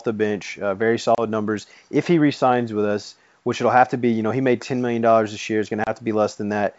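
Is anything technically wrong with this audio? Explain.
Yes. There is packet loss on an ADPCM call, just after "the bench uh very" at 1.15 to 1.22 s and again at 5.84 to 5.90 s. Each time about 30 ms of the G.722 wideband stream, a few packets' worth, is dropped and filled with silence. The decoder's adaptive predictor and step size lose sync with the sender, so the sound returns slightly distorted before it settles. The waveform shows a flat, hard-edged gap, and the spectrogram shows a vertical blank stripe.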